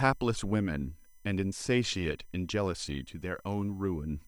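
Throughout the speech runs a USB whine, a fixed-pitch tone built on 1 kHz and its multiples, strongest at 15 kHz and roughly 35 dB below the speech. The bus's 1 ms current bursts leak in through power or ground. Mains hum would instead be spaced at 50 or 60 Hz.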